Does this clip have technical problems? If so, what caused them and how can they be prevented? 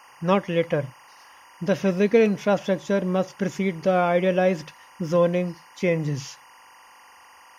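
Yes. Timecode bleed runs through the whole speech clip. A faint chirping warble sits behind the sound, roughly 30 dB below it. It flips between two pitches, around 1 kHz and 2 kHz. Its rhythm fits 24-frame linear timecode. The code is a square wave, and it has leaked from a nearby track or cable into the audio path. To prevent it, route timecode on separate, shielded cables and keep it off tracks adjacent to audio.

At 2.26 s there is a single sharp click. It shows as a thin vertical line across the spectrum. Nothing audible goes missing, because the gap is tiny, a fraction of a millisecond. The likely cause is dropped samples, perhaps only a handful, so the waveform jumps straight to a later value. To prevent it, give the recording chain enough buffer headroom and a stable clock so no samples are skipped.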